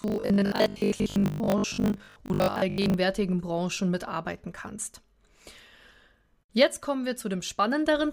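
Robotic sound from repeated short buffers, 0.02 to 2.94 s: a rigid 50 Hz buzz, likely from a 20 ms buffer replayed over roughly half the audio.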